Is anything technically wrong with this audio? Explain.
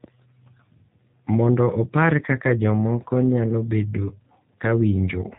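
Yes. G.729 codec damage runs through the whole speech clip, and it is plainly audible. The codec rebuilds each 10 ms frame from a vocal tract filter, a pitch predictor and a handful of pulses rather than the actual waveform. The result is narrowband, with nothing above 4 kHz, and has a slightly rough, synthetic quality that fits the 8 kbit/s G.729A variant used for VoIP. The speech stays intelligible but loses its natural texture.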